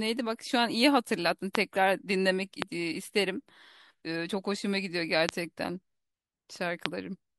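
A loud pop breaks in at 1.55 s, then again at 2.62 s, 5.29 s and 6.86 s. Each is a single sharp click lasting about 20 ms. Each stands far above the speech, and the one at 5.29 s is the strongest. The speech carries on underneath without a gap. The likely cause is a brief voltage spike, such as a static discharge or a driver glitch, entering the signal chain.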